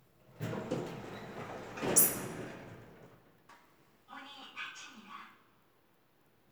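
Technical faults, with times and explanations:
No technical faults are audible anywhere in this audio.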